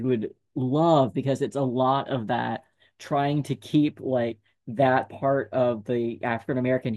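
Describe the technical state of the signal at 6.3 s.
At 6.3 s the speech signal is intact, with no audible fault at that moment.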